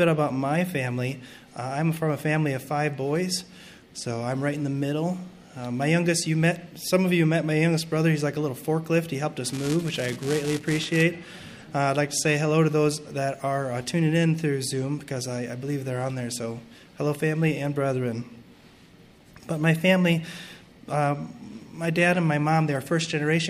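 Buffer tearing from 9.45 to 11.03 s adds a 345 Hz rattle, fitting a 128-sample buffer that replays a tiny slice of slightly older audio; spectrograms show evenly spaced vertical clicks.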